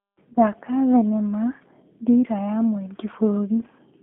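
From start to finish the speech carries G.729 codec damage, and it is plainly audible. The band runs from about 150 Hz to 3.5 kHz, but a simple telephone filter would leave the speech smooth, only narrow. This has the slightly rough, synthetic grain of a coder rebuilding each short frame from a vocal-tract model, a pitch predictor and a few pulses, a sound that fits the 8 kbit/s G.729A variant.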